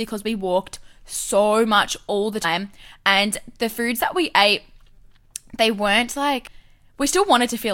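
At 2.43 s, after "so much all the", and at 6.47 s, after "they weren't", compressed frames are skipped. Roughly a fifth of a second of speech vanishes, which suggests about ten missing frames. At each join the audio jumps ahead abruptly.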